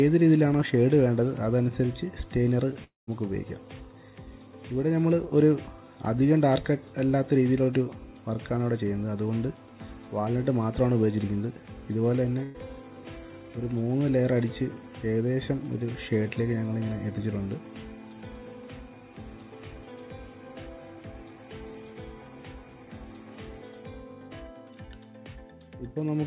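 Long network dropout, 2.84 to 3.10 s: the sound smears into a held, fading buzz or hiss, then drops to silence for about 160 ms before resuming further along. Roughly 240 ms of audio never arrives, and that stretch is lost rather than delayed. The likely cause is a stall in packet delivery. The receiver keeps extending the last thing it heard and lets it decay, covering about 232 ms, and finally gives up and goes quiet until the stream returns.

Burst of packet loss, 12.43 to 12.57 s: a shorter gap of about 120 ms where the receiver's concealment bridges almost all of it, synthesising about 110 ms from the preceding sound and turning it down as it goes, so there is no true silence. What remains is a brief held tone or hiss, then a jump forward. Throughout, nothing reaches above 4 kHz, which points to a narrowband call codec such as G.711 A-law at 64 kbps.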